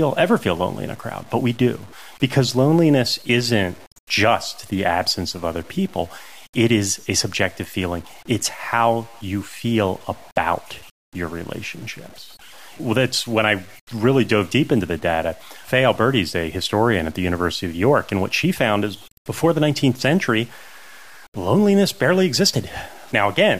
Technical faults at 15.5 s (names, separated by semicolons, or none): low bit depth without dither